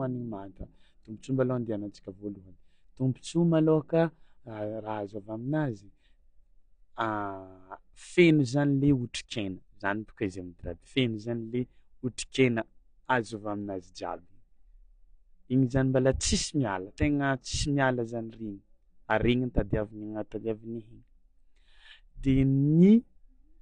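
From start to finish the speech sounds dull and smeared, with a warbling, fizzy edge on sibilants and held sounds, and nothing above 9.8 kHz. This is likely AAC compression, whose damage is plainly audible and fits a low bitrate around 32 kbps.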